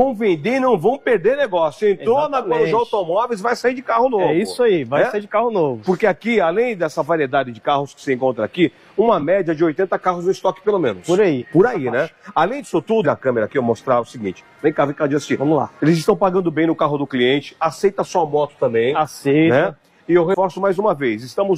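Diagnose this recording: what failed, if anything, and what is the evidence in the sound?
The codec stage is dropping compressed frames skipped in the decode path, so parts of the stream never reach playback. At 11.38 to 11.45 s the audio jumps ahead by roughly one frame, around 50 ms. At 13.01 to 13.06 s it leaps about half a second, and at 20.30 to 20.36 s roughly 100 ms. Jumps in steps of about 46 ms point to whole missing or rejected frames.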